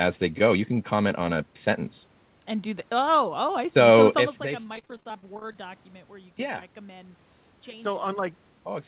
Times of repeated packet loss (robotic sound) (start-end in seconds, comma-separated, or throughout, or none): 4.62-5.59